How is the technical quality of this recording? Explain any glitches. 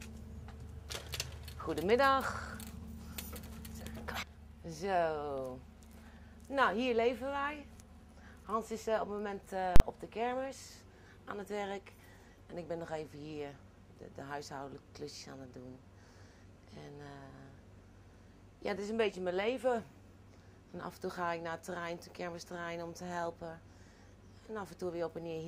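The recording has one clear glitch. From 9.76 to 9.80 s there is a 40 ms block of invalid numbers at full scale. A calculation produced infinite or invalid values, which were forced to one extreme level. The audio jumps to a flat line far beyond its normal peaks and holds there, so its two edges, 40 ms apart, produce a loud bang. A waveform shows a flat-topped rectangle, and a spectrogram shows a bright vertical stripe at each edge.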